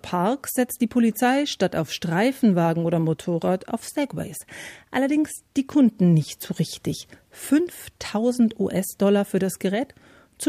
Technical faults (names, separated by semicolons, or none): none